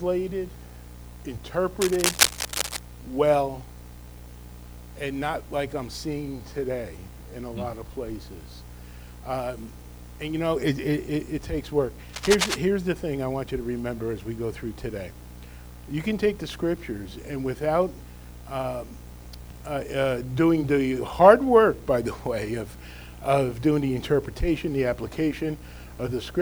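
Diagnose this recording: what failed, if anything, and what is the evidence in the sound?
Twice the sound is overlaid by a harsh, uneven scratching and rustling: from 1.81 to 2.79 s, and again from 12.09 to 12.60 s. Each burst sits at roughly the same loudness as the sound itself, so it competes with it rather than hiding beneath it. This is cable scratch noise in the analogue wiring, likely from a worn cable, connector or control being disturbed, its contact resistance flickering rapidly and injecting dense noise into the signal.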